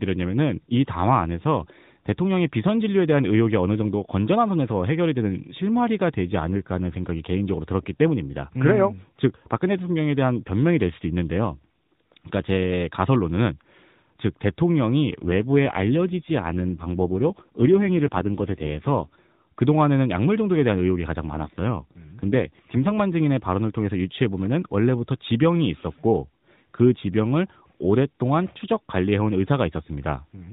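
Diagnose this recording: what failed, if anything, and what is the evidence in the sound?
Codec stage, an AMR rate drop at 15.2–19.1 s and 21.2–22.9 s: the link-driven fall to roughly 5.9 kbps makes speech buzzier, while the spectrogram keeps its 4 kHz band with no gaps.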